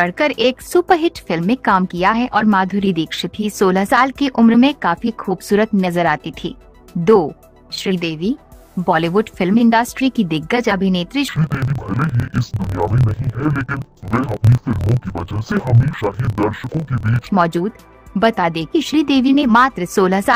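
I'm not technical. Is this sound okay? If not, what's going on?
No. From 11.28 to 17.28 s, the sound drops an octave, doubles up and gets choppy, with a buzz about 38 times a second. That's interleaved audio read as planar: each 26-millisecond chunk of alternating left and right samples gets read as two halves, stretched and played together.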